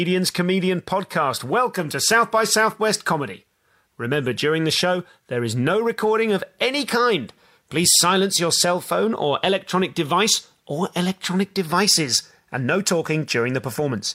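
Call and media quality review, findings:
Nothing stood out on listening to this speech recording.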